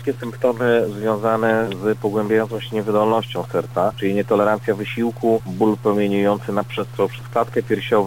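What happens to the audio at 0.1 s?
At 0.1 s the sound carries a distortion that runs through the whole clip, likely from a stuck bit throwing about half the sample values off.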